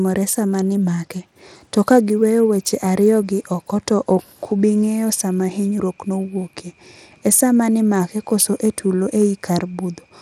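Throughout, the speech carries gritty, flickering treble and nothing above 17.2 kHz, the coarse sub-band damage of likely Bluetooth SBC compression, consistent with about 96 kbps, unlike smoother perceptual codec smearing.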